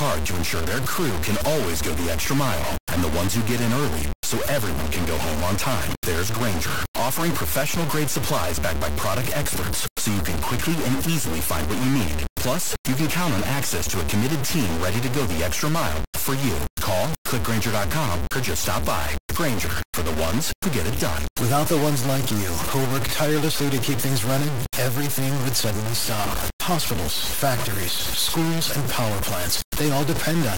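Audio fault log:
Throughout, low bit depth without dither: the speech sits on a coarse staircase of levels, so everything comes out gritty and buzzy, with a grain that tracks the voice itself rather than sitting underneath it as steady hiss. The error is nearly as loud as the speech, and quieter syllables break up or sputter as they flip between just a couple of steps. The sound points to 3-bit audio, most likely truncated with no dither to smear the error into noise.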